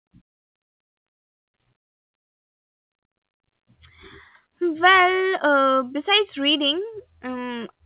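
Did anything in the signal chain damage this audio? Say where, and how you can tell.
No, the speech has come through a call path whose codec sounds like G.711 mu-law, which leaves nothing above 4 kHz and adds its usual low-level coding noise, and no stage in the chain has damaged it beyond that.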